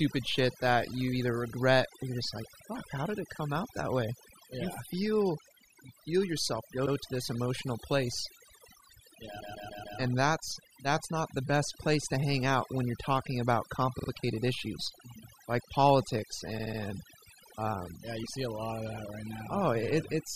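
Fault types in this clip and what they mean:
Overdone noise removal: the noise reduction was pushed too hard for the whole clip, so individual frequency bands near its noise estimate get pulled right down or switched off, taking the quieter bits of speech with them. You hear the background drop and break up into little twinkly specks.
Repeated frames: short runs of compressed audio got played again, so the speech stutters. At 6.85 s, after "feel you feel yourself", a 72 ms chunk plays one extra time before "to this emotional place". At 9.40 s a 144 ms block loops four extra times. At 13.98 s, after "when you're talking about", 48 ms repeats twice more. At 16.57 s, after "like politics", 72 ms repeats three more times.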